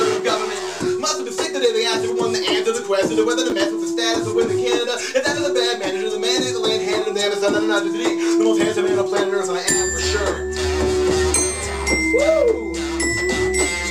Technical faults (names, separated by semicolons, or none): chunks out of order